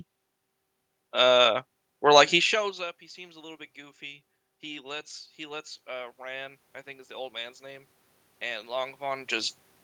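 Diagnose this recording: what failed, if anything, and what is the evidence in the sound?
Automatic gain rising, in the call processing stage. At 2.31 s the speech drops by about 24 dB, around the moment the talker moves back from the microphone. From there until 9.58 s the level climbs slowly, by about 12 dB in total. The room noise swells along with the voice, so the rise comes from gain, not the talker. The gain control saw a quiet input and raised its gain step by step. It only recovered half the loss.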